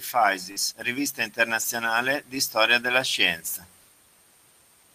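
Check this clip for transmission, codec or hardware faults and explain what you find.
There are two transmission faults in this speech clip: one burst of packet loss and two stretches rebuilt from error correction.

Burst of packet loss, 0.51 to 0.58 s: several consecutive packets never arrived in time to play. The receiver extended the last sound for about 47 ms while fading it down, so the sound is held and fades away. The speech then picks up about 40 ms further along, so a short piece of the utterance is missing.

Lost packet rebuilt from error correction, 0.56 to 0.58 s and 1.62 to 1.64 s: in each place a packet went missing, but the following one carried a low-bitrate backup copy. The decoder played that copy instead of leaving a hole, so the sound continues without a gap. Each 20 ms patch, which fits a single frame, sounds coarser and noisier than the speech around it. The first patch falls at the tail of the loss burst.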